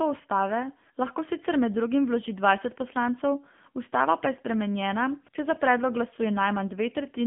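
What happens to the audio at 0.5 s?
At 0.5 s, as throughout, the speech carries AMR narrowband mobile codec damage: nothing above 3.6 kHz, and a buzzy, synthetic vocal-tract coding typical of a low bitrate, unlike a plain telephone-band filter.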